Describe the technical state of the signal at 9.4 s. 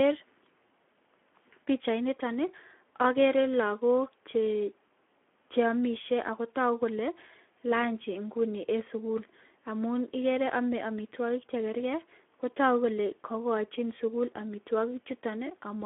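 Speex codec damage runs through 9.4 s and the whole clip: low-rate CELP coding leaves speech hoarse and noisy, band-limited to telephone range, with nothing above 3.7 kHz, consistent with roughly 11 kbps.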